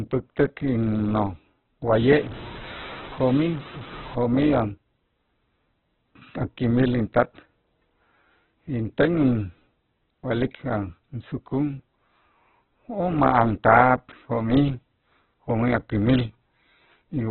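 Right from the start, the speech sounds boxed in and grainy, with nothing above 4.2 kHz, likely heavy Opus compression at a starved, roughly 8 kbps CELT setting. From 1.93 to 4.15 s, low bit depth without dither adds gritty, signal-following distortion, likely from truncating to about 6 bits, with the error only around 15 dB below the signal.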